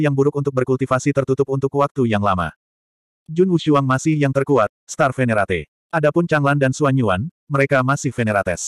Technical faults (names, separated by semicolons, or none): Bluetooth SBC bit pool drop